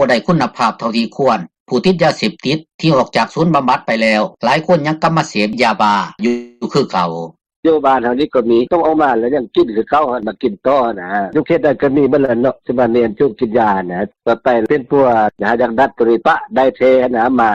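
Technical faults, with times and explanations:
6.27 to 6.64 s, call audio freeze: the sound stops moving and the last moment is carried on as a fading buzz or hiss for about 0.34 s, then picks up exactly where it left off. Nothing is lost, it's just pushed later. Packets held up in transit likely emptied the jitter buffer here.
11.34 to 12.15 s, jitter buffer speed-up: this stretch runs about 14% fast at unchanged pitch and sounds a bit rushed. The receiver had built up extra delay and trimmed it by snipping out tiny pitch-period slices in a row, roughly a tenth of a second in all.
12.25 to 12.40 s, short stall from a late packet: right after the catch-up, a packet wasn't there on time, so the receiver held the current sound about 30 ms too long, with a faint buzz or dip, before carrying on from the same spot with nothing missing.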